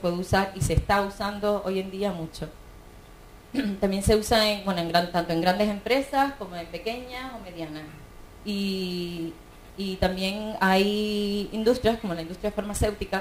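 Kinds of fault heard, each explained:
Sample clock jitter: the converter's sampling clock wanders by around 7 microseconds rms, so each sample is captured a little early or late at random, and the resulting error scales with how steeply the waveform is changing at that instant. Here that error sits roughly 25 dB below the signal throughout, heard as a grainy hiss riding on the sound that swells on loud, bright passages and drops away when the audio goes quiet.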